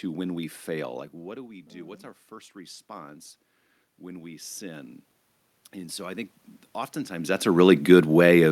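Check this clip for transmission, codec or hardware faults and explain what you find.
Automatic gain rising occurs at 1.46–2.92 s after "what do", 3.99–5.0 s, and 5.72–6.4 s before "oftentimes that's". Sensing quieter input, the gain control slowly raised its level by about 4, 4 and 3 dB, so the speech and room noise swell together.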